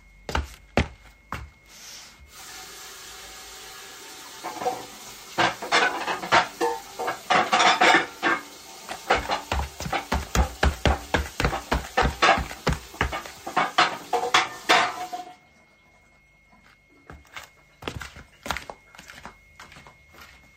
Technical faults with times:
1.86 dropped samples
10.57 dropped samples

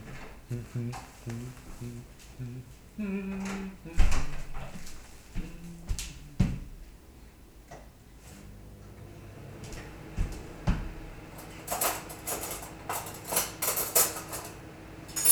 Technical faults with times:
none

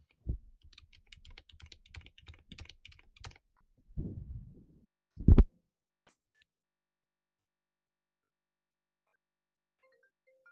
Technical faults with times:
none

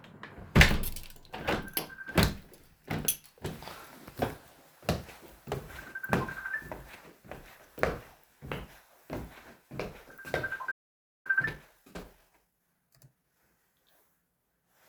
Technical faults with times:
10.71-11.27 playback stall
11.27-13.41 time-compressed catch-up

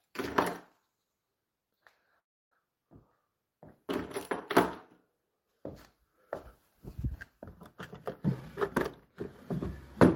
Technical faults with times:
2.19-2.54 call audio freeze
8.25-8.58 jitter buffer speed-up

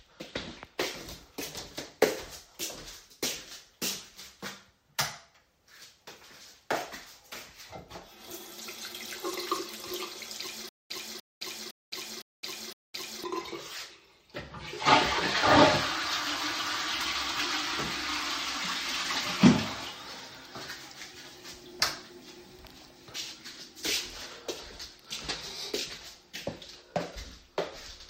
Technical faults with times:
10.69-13.24 stutter with silent gaps

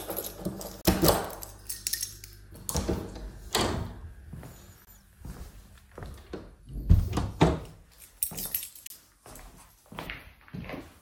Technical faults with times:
0.81-0.85 gap between stream segments
4.85-4.87 gap between stream segments
8.87-8.90 gap between stream segments

